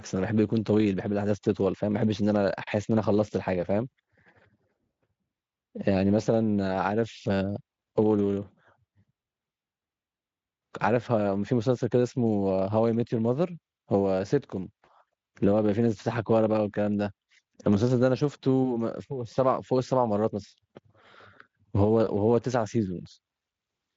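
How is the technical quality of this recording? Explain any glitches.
No glitches to report: the speech carries through a wideband Speex path whose top end stops near 7.7 kHz, consistent with a high-quality setting around 34 kbps, with coding damage faint at most.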